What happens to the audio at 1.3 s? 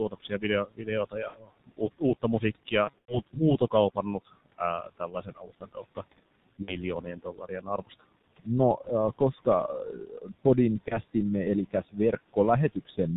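Between 1.28 and 1.39 s, VoIP packet loss concealed by the speech codec: about 60 ms of data, which fits two lost 30 ms frames, went missing, and the decoder extended its last pitch and filter at falling gain. It sounds like a brief buzzy tone or coloured noise that fades. On a spectrogram, the harmonics turn into flat, repeated stripes, and the waveform shows a periodic pattern shrinking in amplitude.

That moment also falls inside a longer stretch, from 0.09 to 5.97 s, of speech cut by the noise suppressor. It mistook parts of the speech for background and turned them down by as much as about 19 dB, around a second and a half in total. The affected parts sound swallowed or faint. They appear as sudden dips in the waveform envelope and as consonant energy missing from the spectrogram.

Underneath everything is heavy G.723.1 codec damage at 6.3 kbit/s. Nothing passes above 4 kHz, so the spectrogram shows a hard ceiling there, and the slow-updating voice model makes the sound muffled and hoarse, with smeared consonants.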